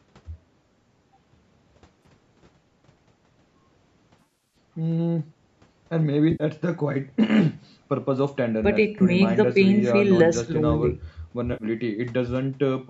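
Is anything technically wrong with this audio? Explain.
Yes. Brief smeared, noisy patches interrupt the speech at 2.03–2.05 s, 4.19–4.56 s, 6.32–6.44 s, 8.99–9.02 s and 11.53–11.64 s. This is AAC frame loss with concealment: the decoder patched missing frames from the last good spectrum. The 4.19 s stretch is a scatter of short gaps, none much longer than about 40 ms.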